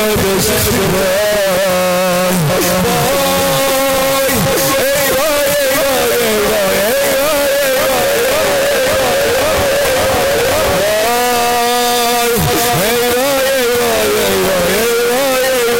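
Float read as integer runs throughout. The waveform sits near a square shape at an almost fixed, high level, very loud and harsh, with background noise as loud as the main sound. This likely comes from 32-bit float samples decoded as 32-bit integers, so sign and exponent bits dominate.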